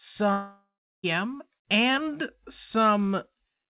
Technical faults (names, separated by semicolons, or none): long network dropout